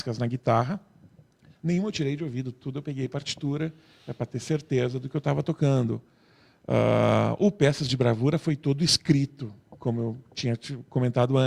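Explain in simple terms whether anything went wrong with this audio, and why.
Nothing went wrong; no problems can be heard here.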